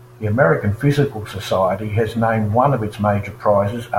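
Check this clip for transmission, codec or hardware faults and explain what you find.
No transmission, codec or hardware fault can be heard anywhere in the speech, with the signal staying continuous and intact throughout.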